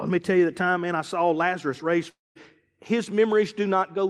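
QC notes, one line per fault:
2.09–2.37 s, long network dropout. The sound stops and the last fragment stretches into a fading buzz, then about 190 ms of silence follows. Speech resumes with about 260 ms missing. Likely lost packets, with the receiver concealing the gap until it gave up.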